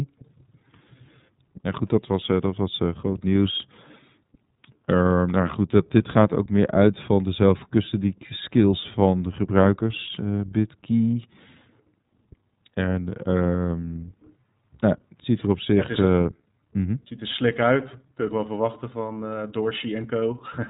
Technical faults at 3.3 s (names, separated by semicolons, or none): iLBC codec